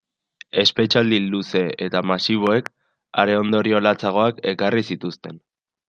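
At 2.47 s a loud pop breaks into the speech, followed by a second one before 2.68 s. They jump well above the voice, peaking roughly 15 dB above it. A sudden voltage spike, likely from a switch or static discharge, hit the signal. The speech continues underneath.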